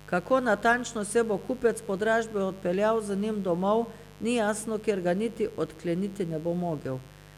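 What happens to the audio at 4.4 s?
At 4.4 s the speech sits over a mains buzz that runs through the whole clip, some 25 dB below the voice. Spikes twice per 50 Hz cycle spread harmonics into the kilohertz range, giving a raspy edge rather than the smooth, low tone of plain hum.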